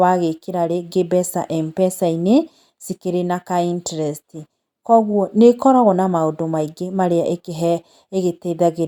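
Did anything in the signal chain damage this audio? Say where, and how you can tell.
No, nothing in this speech recording stood out as damage from any stage of the signal chain on listening.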